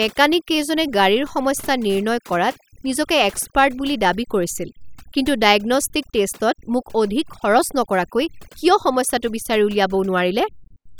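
Overdone noise removal runs throughout, with heavy suppression gating frequency bands near the noise floor, leaving twinkling near-silence between phrases.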